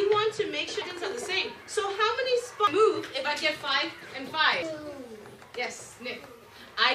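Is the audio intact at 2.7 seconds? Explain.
No. At 2.67 s there is damaged data in the compressed stream. Corrupted bytes leave the decoder unable to read the frames there. It loses sync and hunts for the next valid frame header. This produces a brief chirp or blip in the sound.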